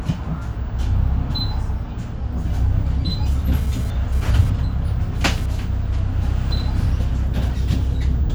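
A nearby 2G phone's data bursts, rectified by the audio circuitry, cause GSM phone buzz from 3.54 to 5.46 s: a raspy 217 Hz buzz about 22 dB below the sound.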